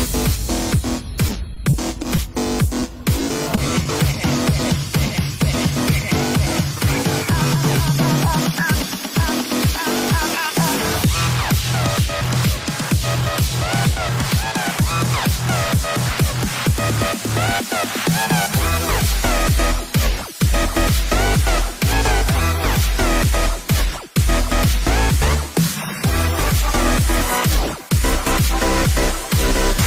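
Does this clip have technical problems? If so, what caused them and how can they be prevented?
Yes. Repeated packet loss (robotic sound) occurs in two bursts: from 1.27 to 2.18 s, with five short dropouts none longer than 30 ms, and from 2.80 to 3.86 s, with seven dropouts of at most 20 ms. Each hole was concealed by extending the preceding sound, so the audio turns choppy, with under a tenth of each stretch patched. Preventing it means adding a larger jitter buffer and forward error correction on the network path.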